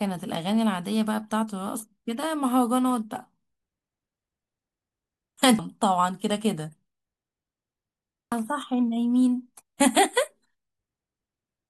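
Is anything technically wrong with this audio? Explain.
Yes. At 5.59 s and 8.32 s there is damaged data in a compressed stream. Corrupted bytes make the decoder misread frames and lose sync while it hunts for the next valid header, so the speech is broken by a brief chirp, squawk, click or short hole at each point.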